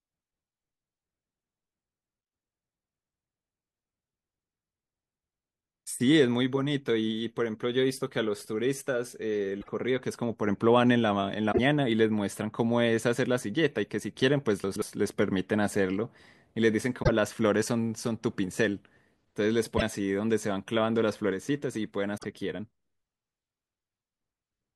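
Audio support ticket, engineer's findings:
Damaged data in a compressed stream: short glitch bursts at 9.58–9.68, 11.48–11.59, 16.99–17.09, 19.74–19.82 and 22.14–22.25 s. Decoder misreads corrupt frames and resyncs at the next header. Heard as a chirp, squawk, click or short hole, not reordered sound.

Chunks out of order: jumbled moment at 14.64–14.82 s. A 60 ms chunk is written two chunks late, so audio plays out of sequence with hard joins. No squawk and no skip, unlike corruption; the sound is intact but misordered.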